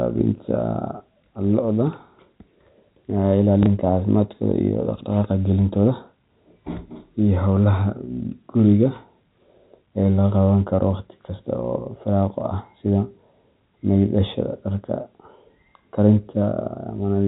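Periodic clock jitter, from 1.44 to 7.26 s: the converter's clock wobbles at roughly 300 Hz, adding sidebands around every component of the speech, heard as a rough, metallic edge.

Packet loss with last packet repeated, at 3.63 to 3.66 s: about 30 ms went missing and the previous packet was replayed, leaving a small blip.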